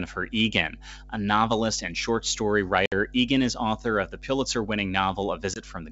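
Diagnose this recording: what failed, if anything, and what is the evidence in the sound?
Mains hum, analogue wiring: a steady 50 Hz tone throughout, about 20 dB below the speech, from a ground loop or transformer coupling into the line.

Packet loss on an ADPCM call, network: hard-edged silences at 2.86 s, right after "novelist and short story", and 5.54 s, roughly 60 ms then 20 ms lost. The decoder's predictor and step size desynchronise, so speech returns slightly distorted before settling.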